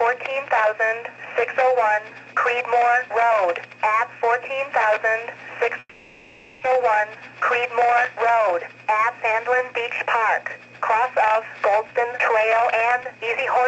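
This audio comes through a call path. There's a call audio freeze from 5.79 to 6.64 s: the last sound is stretched into a fading buzz or hiss, ending in a brief silence, likely because packets were held up and the jitter buffer ran dry. Nothing is lost, just about 0.8 s of added delay. Then from 11.82 to 13.65 s a jitter buffer speed-up kicks in, running about 113% at the same pitch as short pitch-period slices are trimmed, cutting roughly a fifth of a second so it sounds hurried.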